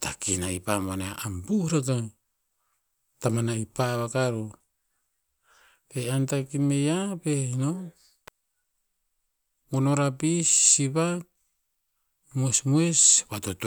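At 8.28 s a single sharp snap cuts across the speech. It is an electrical switching spike. A nearby switch, motor or static discharge likely arced, and the audio line picked it up. The snap is very brief, peaking around -20 dBFS.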